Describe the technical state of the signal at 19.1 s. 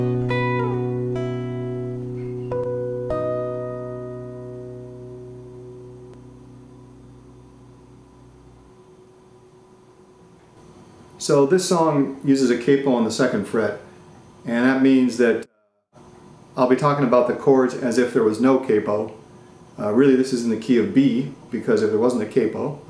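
At 19.1 s the signal is intact, with no dropout, distortion, glitch or other audible fault at that moment.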